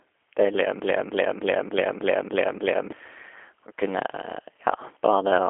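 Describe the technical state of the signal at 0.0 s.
At 0.0 s the speech already carries G.729 codec damage, which runs through the whole clip rather than starting at a specific point. The coder rebuilds each 10 ms frame from a vocal tract filter, a pitch predictor and a sparse set of pulses. That produces the plainly audible rough, slightly synthetic texture, which fits an 8 kbit/s G.729A encoding. The band is confined to a telephone line, about 300 Hz to 3.4 kHz, with nothing above 3.8 kHz.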